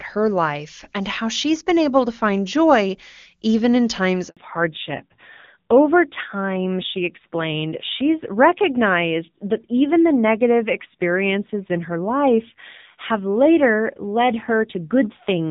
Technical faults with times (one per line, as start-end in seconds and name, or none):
4.29-4.37 handover gap
4.37-15.51 fallback to narrowband